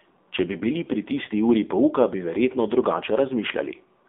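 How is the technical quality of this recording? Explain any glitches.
Quality is limited by plainly audible mobile-codec damage across the whole recording. AMR narrowband mobile codec, throughout: speech is squeezed into a 250 Hz to 3.6 kHz band and rebuilt from a vocal-tract model, sounding buzzy and synthetic in a way that fits a 7.4 kbps mode.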